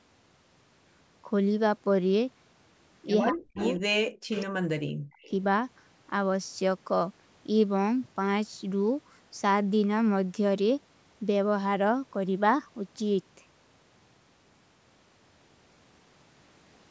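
At 3.3 s the speech dips sharply for about a fifth of a second, falling by around 35 dB at its deepest before recovering by 3.61 s. This is speech suppressed in double talk, likely an echo canceller turning the near talker down while the far side was also speaking. On a waveform the envelope pinches almost to nothing. A spectrogram shows a near-empty vertical gap cutting across the harmonics.

Overlapping its tail, from 3.55 to 3.8 s, a delayed copy of the voice comes through, sitting about 10 dB below the speech and lagging it by about 196 ms. That is echo leak: sound from the loudspeaker likely reached the microphone and was not fully cancelled. On a spectrogram it appears as a weaker, shifted ghost of the preceding harmonic pattern.

From 4.19 to 5.22 s the suppression returns for about a second in total, with drops reaching around 40 dB.

Inside this stretch, at 4.3 to 4.45 s, the echo leaks again at about 10 dB down. 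A last trace follows at 5.2 to 5.3 s, around 35 dB down and barely visible. Both carry the same 196 ms lag.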